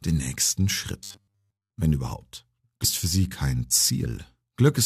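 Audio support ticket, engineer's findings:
Robotic sound from repeated short buffers, 1.04 to 1.73 s. Rigid metallic buzz at 100 Hz, which fits a 10 ms chunk replayed over and over in place of most of the real audio. Likely cause: input starved, playback buffer underrun. Fixed pitch distinguishes it from random dropout clicks.

Damaged data in a compressed stream at 2.84 s. Brief blip. Decoder hits a corrupt frame, loses sync and resyncs at the next header. Single event, no steady pitch, unlike the buffer-repeat buzz.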